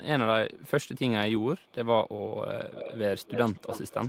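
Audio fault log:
0.54–0.68 s and 1.58–1.73 s, echo leak: a very faint copy of the speech returns about 199 ms late, around 40 dB below it, likely from a far-end echo canceller missing residue. On a spectrogram it shows as weak, time-shifted harmonic traces, barely visible in the waveform.
2.73–2.98 s and 3.18 s to the end, echo leak: a much stronger delayed copy, about 267 ms behind and roughly 10 to 15 dB below the speech, likely from the same uncancelled loudspeaker pickup. It shows as a clear second, smeared set of harmonics and doubled waveform bursts.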